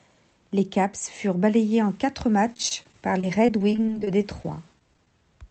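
Repeated packet loss (robotic sound) runs from 2.52 to 5.07 s, right after "furent balayés en quatre": brief packet gaps, each up to 23 ms, are concealed by repeating the previous sound, leaving choppy, robotic speech.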